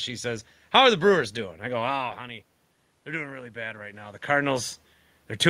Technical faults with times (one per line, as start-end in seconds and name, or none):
3.06-4.29 automatic gain rising